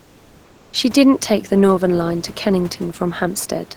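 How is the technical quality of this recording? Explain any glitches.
One glitch is audible, at the very start. From 0.00 to 0.73 s there is comfort noise in place of the background: a steady, featureless hiss about 3 dB quieter than the genuine room noise that follows, likely generated by the receiver during discontinuous transmission.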